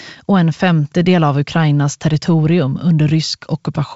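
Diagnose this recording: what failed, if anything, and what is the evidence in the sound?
Nothing failed; the wideband telephone coding works as intended.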